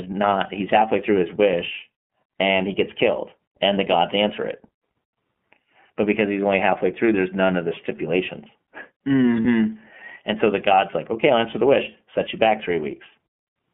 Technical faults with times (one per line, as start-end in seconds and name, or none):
0.00-13.73 iLBC codec
9.42-9.46 lost iLBC frames